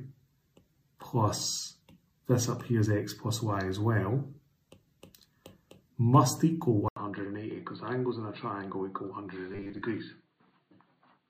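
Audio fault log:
6.88 to 11.30 s, input switched to a poorer device: The capture path appears to have dropped to a narrower-band input, likely a different microphone or a headset's call profile. An 80 ms gap marks the changeover. After it, the band is narrower, so the sound turns dull and boxy. The level sits about 5 dB lower, and a faint new background noise appears, roughly 50 dB below the signal.
9.52 to 9.82 s, robotic sound from repeated short buffers: Audio stopped arriving in time, and the software covered the gaps by looping a short chunk, likely a 10 ms buffer, while skipping real material. About half of this stretch is repeated audio. Replaying the same 10 ms over and over stamps a fixed 100 Hz pitch onto the sound, giving a rigid, metallic buzz that still loosely follows the original contour.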